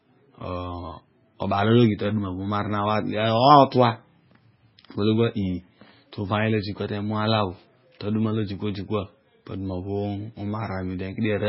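From start to finish the speech has no treble above about 5.5 kHz and sounds watery and swirly, with chirpy s sounds and smeared attacks. That's heavy damage that most likely comes from MP3 compression, pointing to a very low bitrate around 16 kbps.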